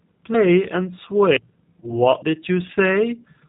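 Speech, squeezed through what sounds like the G.729 codec the whole way: nothing above 4 kHz, and a slightly rough, synthetic edge that comes from the voice being rebuilt from a vocal tract filter, pitch predictor and sparse pulses, which fits an 8 kbit/s VoIP link. Around 1.80 s there's VoIP packet loss concealed by the speech codec. About 30 ms went missing, likely a single packet, and the decoder stretched its last frame to fill the gap, fading as it went, with the voice staying weak until roughly 1.92 s as the following frames rebuilt from that degraded state.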